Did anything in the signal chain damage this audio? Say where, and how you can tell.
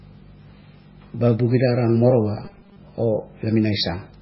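Yes. At the codec stage, the whole clip carries heavy damage, likely from MP3 compression. The speech sounds watery and swirly, and nothing reaches above 5.5 kHz. On a spectrogram there is a hard ceiling at 5.5 kHz, and the weaker components in the upper bands flicker on and off from frame to frame. That fits a bitrate of roughly 16 kbps, where the encoder runs out of bits, drops weak frequency lines and cuts the treble.

From 2.45 to 2.77 s, at the driver or buffer stage, there is robotic sound from repeated short buffers. For that stretch the speech turns into a rigid 200 Hz buzz. The cause is likely new audio arriving too seldom, so playback fills the gaps by looping the last 5 ms while the real audio is skipped. Most of the stretch is made of these repeats. On the waveform it looks like an identical block recurring every 5 ms, and a spectrogram shows fixed harmonics at 200 Hz spacing.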